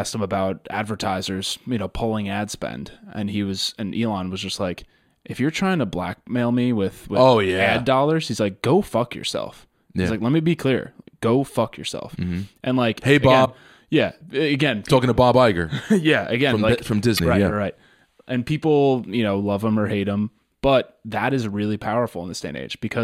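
Damaged data in a compressed stream hits this speech clip twice: at 13.42 to 13.47 s, right after "like hey again" and before "yeah again talking to", and at 17.15 to 17.21 s, between "again from like from" and "right yeah right". Each is a brief glitch of roughly 55 ms, where corrupted bytes made the decoder misread frames, lose sync and hunt for the next valid frame header before normal playback resumed.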